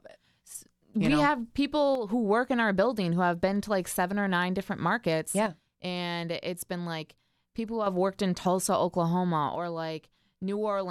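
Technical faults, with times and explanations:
1.95–2.09 s, 5.46–7.86 s and 9.55 s to the end: one channel drops out. The speech level falls abruptly by about 6 dB three times, first just after "we know have", then after "or nine different markets" until "worked in", then through the final stretch. The likely cause is one stereo channel going silent: with only one side feeding the mono sum, shared content loses half its amplitude, and anything carried only by the missing side vanishes.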